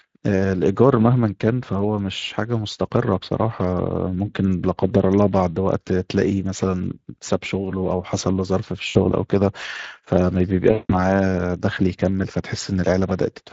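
Speex codec coding runs through the whole clip. The CELP coder has too few bits to model the excitation, so the speech sounds noisy and hoarse, and the damage is plainly audible. The damage fits a Speex mode of roughly 20 kbps.

VoIP packet loss concealed by the speech codec occurs from 8.89 to 9.08 s and from 10.71 to 10.96 s. The decoder fills the gaps by extending its last pitch and filter at falling gain, which fits about 60 ms and 180 ms of lost audio. Each gap turns into a fading buzzy or coloured smear, and the voice stays weak or distorted briefly afterwards.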